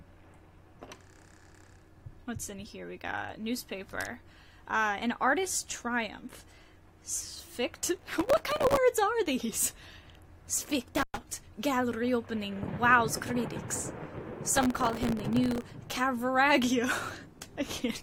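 From 7.95 to 8.77 s, and again from 14.57 to 15.71 s, processor overload crackle tears through the sound. Dozens of very short buffers, a millisecond or two each, miss their deadline and replay stale audio, leaving dense vertical clicks on the spectrogram and jagged steps in the waveform.

At 10.96 to 11.18 s, an intermittent contact briefly opens the line for about 0.11 s. The sound drops out with crackle at both edges, which shows as a near-empty waveform stretch bracketed by sharp broadband spikes on the spectrogram.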